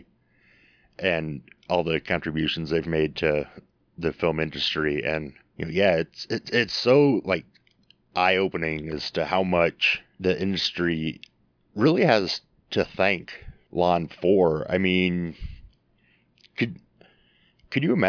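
No technical faults are audible.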